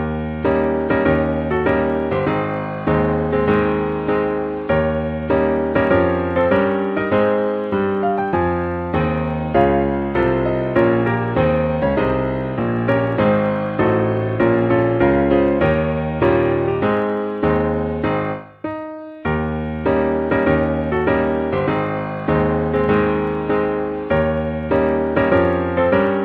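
Clock slip clicks run from 0.1 s to the end, a fast, soft rattle of ticks roughly every 30 ms, most audible on loud, high or sustained passages and absent in silence. Each tick is a single sample dropped or repeated. The likely cause is two devices running on separate clocks with nothing to lock them, mismatched by something like 1000 ppm, so a whole sample of drift builds up many times a second.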